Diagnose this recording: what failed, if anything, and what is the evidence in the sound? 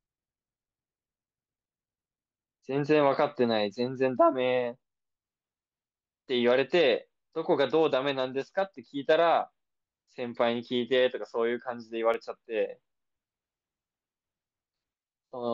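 CD scratch ticks appear from 12.14 to 12.59 s as three brief clicks in the speech, each well under a millisecond. This is a playback-stage fault: a disc blemish passes the laser once per revolution, destroying more data than error correction can rebuild, so the player conceals the samples.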